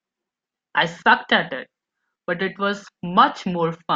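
A short speech recording, with nothing technically wrong to be heard in it. No event in the audio calls for a time or a cause.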